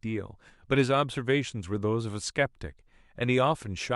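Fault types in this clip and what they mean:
No technical faults can be heard in this recording.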